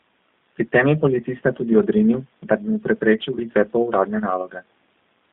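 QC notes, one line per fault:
Throughout: G.729 codec, low-bitrate speech coding audible as rough, synthetic timbre; spectrogram shows content confined to roughly 150 Hz to 3.7 kHz, nothing above 4 kHz.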